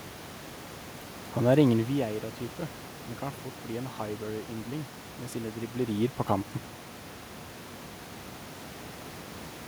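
No technical fault can be heard in this speech clip. The level rises and falls smoothly as if moved on a fader, and the room's background noise sits about 19 dB below the speech.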